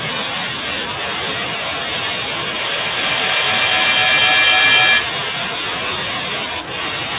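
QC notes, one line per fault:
2.57–5.29 s, feedback echo between two devices: the sound returns about every 0.3 s, each pass thinner and more ringing, and the repeats build to about 7 dB above the speech. A second device in the room replays the call, its microphone feeds it back, and neither canceller removes the other's output.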